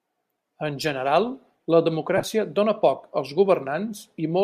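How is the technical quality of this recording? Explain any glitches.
There's one real glitch, a short burst of lost LE Audio frames around 2.17 to 2.24 s. Across that roughly 60 ms stretch, about 45 ms of audio goes missing in scattered gaps, the longest around 20 ms, which fits several 7.5 ms codec frames dropping over the Bluetooth link. The LC3 decoder papers over each gap by reusing the last spectrum with scrambled signs, so the speech briefly turns into a grainy, noisy smear rather than clean silence. The light graininess you hear elsewhere is likely just the LC3 encoding itself.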